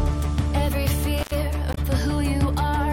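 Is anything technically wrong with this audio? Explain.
Yes, two separate faults are audible.

Intermittent contact, from 1.18 to 1.34 s: a loose plug or cable connection briefly loses contact, and for roughly 88 ms of that span the circuit is fully open. The audio drops out abruptly, with crackle at the edges as the contact breaks and remakes. During the gap only a faint residual hiss from the rest of the chain remains. The sound then snaps back when contact is restored.

Damaged data in a compressed stream, from 1.71 to 1.78 s: a stretch of the encoded data is corrupted, so the decoder cannot read those frames properly. It loses sync and hunts forward for the next valid frame header before resuming normal output. This is heard as a short, unnatural chirp or blip lasting about 70 ms, distinct from the cleaner, hiss-filled dropout of the contact fault earlier.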